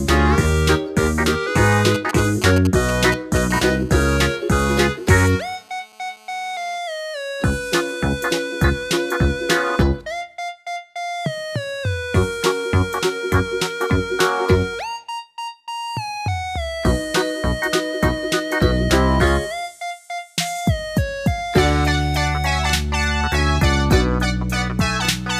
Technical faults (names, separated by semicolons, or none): GSM signalling bursts; GSM phone buzz